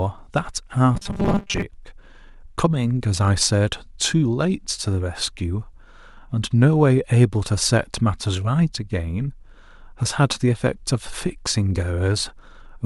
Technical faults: robotic sound from repeated short buffers

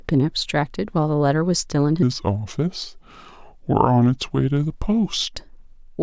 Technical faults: wrong sample rate

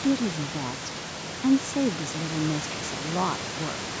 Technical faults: none

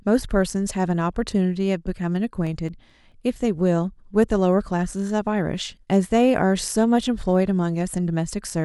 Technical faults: CD scratch ticks

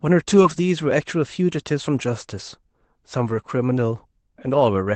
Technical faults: lost packet rebuilt from error correction; short concealed packet loss

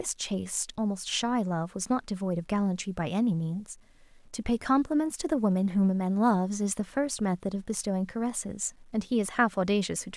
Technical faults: low bit depth without dither

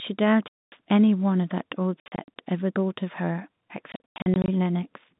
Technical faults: packet loss filled with silence

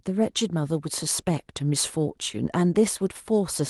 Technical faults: none

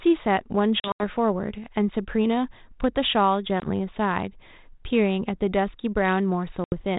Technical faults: packet loss on an ADPCM call

